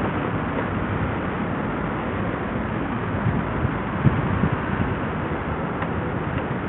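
From start to finish, the audio has likely been squeezed through Bluetooth SBC compression at a starved setting, which fits a bitrate near 48 kbps. The upper sub-bands receive no bits, so nothing remains above 3.7 kHz, and coarse quantisation leaves a gritty, aliased roughness.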